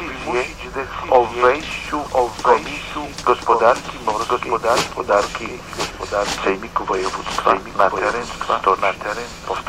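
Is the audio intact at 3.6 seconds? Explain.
No, the audio is likely being captured twice through a slower path, so a doubled audio track runs throughout: a dry, full-band copy about 5 dB quieter trails roughly a second behind.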